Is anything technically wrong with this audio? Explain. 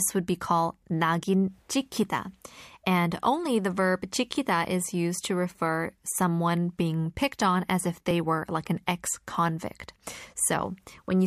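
Yes. From 8.11 s to 11.08 s, just after "picked on as if", there are periodic USB or driver dropouts: about four brief losses, spaced evenly at 0.99 s. Each time, something blocks the audio path and roughly 10 ms of speech is skipped outright, so the waveform jumps and a tick is heard. The strict, clock-like spacing separates this from random packet loss, whose gaps fall irregularly.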